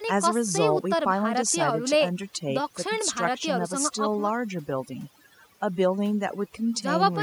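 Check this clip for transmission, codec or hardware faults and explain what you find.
One fault runs through the whole recording, and it is overdone noise removal. Throughout the speech, a noise reduction stage set too aggressively has pulled individual frequency bands down to nothing wherever they sat close to its noise estimate. That takes the quieter parts of the voice with it. The background drops to near silence speckled with twinkling artefacts. Unlike a noise gate, the processing acts band by band rather than muting everything at once.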